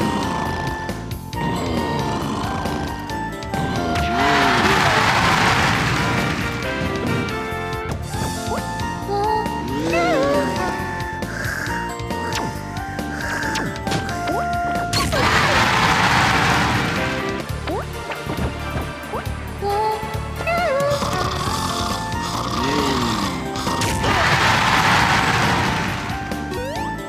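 No technical faults can be heard anywhere in this audio.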